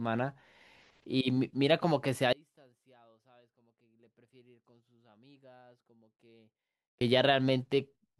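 An audio dropout to a faint residue runs from 2.33 s to 7.01 s, a gap of about 4.7 s in the speech. The likely cause is a break in the signal feed ahead of a stage that stayed powered, so the path kept passing whatever reached it. The speech cuts off abruptly rather than fading, and during the gap only a faint leak remains, roughly 30 dB below normal level, before the sound snaps back.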